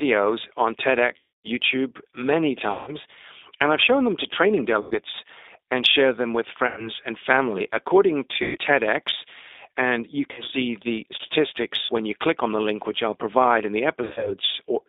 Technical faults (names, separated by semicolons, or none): G.729 codec; VoIP packet loss concealed by the speech codec